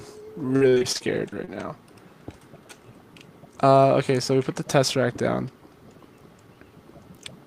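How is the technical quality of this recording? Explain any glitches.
The recording has one glitch: a burst of repeated packet loss (robotic sound) from 0.47 to 1.55 s. Many short holes, the longest 44 ms, were patched by stretching the preceding sound, concealing about a quarter of that stretch. The result is choppy, with pieces missing. Unlike a single dropout, it stutters repeatedly rather than going silent once.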